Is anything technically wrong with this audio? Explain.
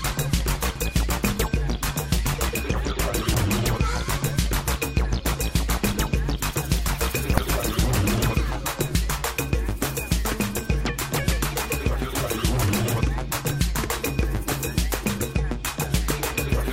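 Yes. Three brief glitches break in at about 0.75 s, 3.34 s and 7.38 s, each lasting only a few milliseconds. They are the signature of damaged data in a compressed stream. At those points part of the encoded data has been lost or corrupted, so the decoder misreads the affected frame, loses synchronisation and searches for the next valid frame header. The garbled output during that moment is heard as a blip before decoding resumes.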